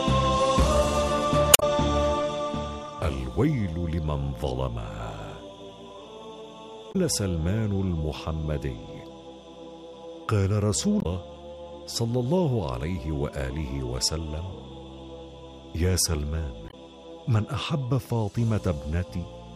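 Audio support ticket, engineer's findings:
Damaged data in a compressed stream, 1.50–1.63 s, 6.89–6.96 s, 10.99–11.06 s, 16.66–16.74 s: short garbled bursts in the decoded audio. Component: compressed source stream. Corrupt frames are misdecoded and the decoder loses sync, then resyncs at the next frame header.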